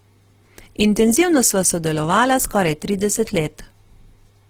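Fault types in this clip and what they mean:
Opus compression: The speech was likely passed through Opus in its music mode at a rate that fits about 16 kbps. With too few bits, bands are filled in rather than coded, so the speech sounds plainly rough and grainy throughout while still reaching about 20.4 kHz.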